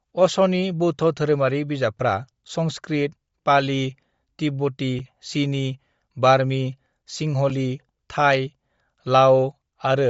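Bluetooth LC3 compression is the likely cause of the damage that runs through this speech recording from start to finish. Nothing is heard above about 7.7 kHz, and the highest remaining band has a breathy, grainy texture where noise has been substituted for detail the encoder discarded. The damage is plainly audible and fits a low-rate LE Audio link, around 32 kbps with 10 ms transform frames.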